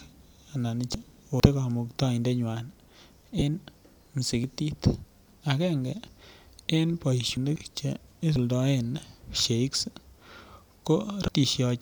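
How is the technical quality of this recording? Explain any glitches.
The speech recording has two kinds of glitch, heard as brief chirps and small skips.

Damaged data in a compressed stream occurs at 0.94 s, 3.38 to 3.42 s, 7.37 s and 11.28 to 11.30 s. Corrupted bytes make the decoder misread frames and lose sync. It then hunts for the next frame header. Each spot sounds like a short chirp or blip.

Dropped buffers (overrun) occur at 1.4, 4.44, 6.08, 7.56 and 8.36 s. Each is a jump ahead in the speech. The first loses about a tenth of a second. The others lose a few tens of milliseconds. The likely cause is samples not being read before the hardware overwrote them, so the two sides join with no gap.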